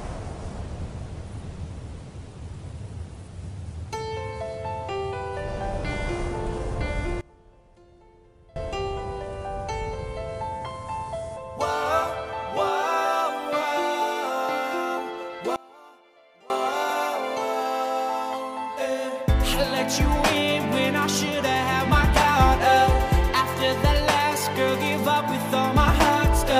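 A gain setting was likely applied with no ramp, so the level steps abruptly in a sudden gain jump: from 7.21 to 8.56 s and again from 15.56 to 16.5 s, sound and background noise both fall by about 24 dB at once, then snap back.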